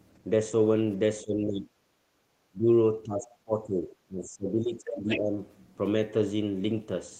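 A short speech recording shows three echo-canceller faults. The talker's level dips sharply from 1.23 to 1.72 s, 2.5 to 2.67 s and 3.04 to 5.4 s, by roughly 15 to 25 dB. This is likely speech suppressed in double talk: the canceller confused the talker with loudspeaker echo and turned both down. From 2.0 to 2.22 s the room sound drops by about 11 dB, then returns. That is background gated by the echo canceller, which clamped the microphone while the loudspeaker played. From 4.85 to 5.19 s a second, fainter voice comes through, roughly 10 dB below the talker. This is likely the other side's voice leaking through, left over because the canceller did not fully remove it.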